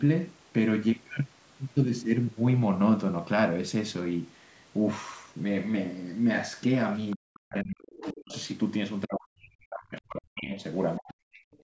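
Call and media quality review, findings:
Other side's voice leaking through: faint second voice at 7.11–7.16, 8.0–8.14, 8.33–8.47 and 11.54–11.58 s, roughly 15 to 40 dB under the speech. Likely residual echo the echo canceller missed. Shows as weak, fragmented harmonic streaks beneath the main voice.

Speech suppressed in double talk: talker dips by as much as about 40 dB at 7.16–8.35, 9.05–10.62 and 10.98–11.52 s. Likely the echo canceller ducking both sides during overlap. Waveform shows envelope collapses; spectrogram shows level drops.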